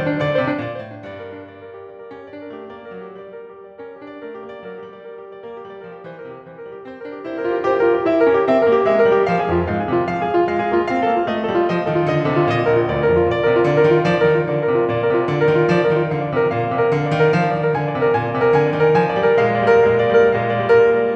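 This music clip has zipper noise from 0.49 to 0.89 s as the level drops about 15 dB and from 7.18 to 7.76 s as it rises back. It comes from roughly a hundred unsmoothed gain steps a second, which show as a staircase envelope and faint vertical ticks on a spectrogram.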